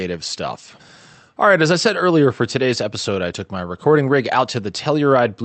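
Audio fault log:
throughout: clock drift between sender and receiver. The speech has a faintly uneven pace, with tiny hiccups that come and go at irregular spacing rather than on a steady beat. The sending end's clock is running fast, by roughly 4 percent, so audio arrives quicker than the receiving end plays it out. The jitter buffer keeps creeping toward overflow and has to shed material to stay in step, leaving those small stumbles scattered across the clip.
0.17 to 5.38 s: repeated timing corrections. Through this stretch the delivery sounds slightly hurried and unsteady, as if short slivers keep going missing, each one too brief to register as a clear gap. These are the receiver's trims, all in the same direction, cutting short pieces so that playback runs at about 104 percent to keep up with the faster sender. Because the cuts land unevenly, the result is a wobbling tempo rather than a smooth speed-up. 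Under these edits the call codec's band limit leaves nothing above about 8 kHz, which fits Opus at a modest bitrate.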